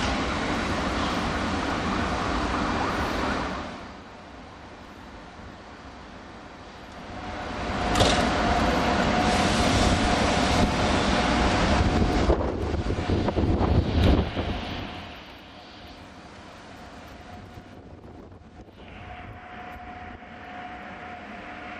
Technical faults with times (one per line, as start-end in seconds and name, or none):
14.12-15.38 zipper noise